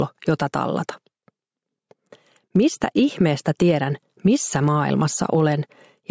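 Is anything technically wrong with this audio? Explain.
Yes. Throughout the clip there is gain pumping: the gain swings by roughly 10 dB, pulled down on each loud sound, likely from excessive gain driving a fast limiter. The band-limiting to 8 kHz comes from normal call microphone processing.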